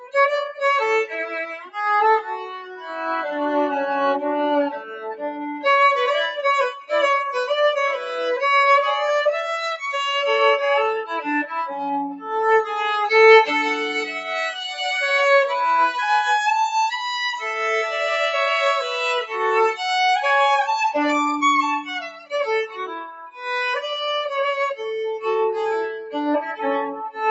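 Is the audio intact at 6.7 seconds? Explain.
No. From 6.72 to 6.91 s the sound is cut by the noise suppressor. A speech-oriented suppressor judged this sound to be noise and pulled it down by as much as about 16 dB for roughly a fifth of a second. The sound sinks in level. On a waveform the envelope caves in over that span. A spectrogram shows the energy thinning to a faint band before recovering.

That dip sits within a wider problem: a noise suppressor applied to music or sounds, active across the whole clip. It keeps turning steady content up and down by roughly 5 dB as it reclassifies it, so held parts pump and flutter while attacks pass. On a spectrogram sustained bands look patchy and uneven instead of smooth. The waveform envelope wobbles in level without any matching change in the source.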